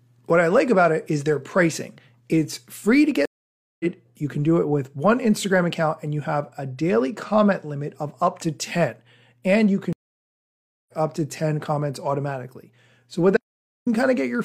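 At 3.25 s, right after "free to", the speech goes silent for 0.54 s and resumes roughly 0.4 s further on. At 9.93 s a 0.95 s silence ends with "up to", skipping about half a second. Both are stream reconnects: the connection broke and a fresh decoder restarted mid-stream. From 13.37 to 13.87 s the speech cuts to dead silence with no room tone. This audio dropout to silence was likely caused by lost input while silence was recorded.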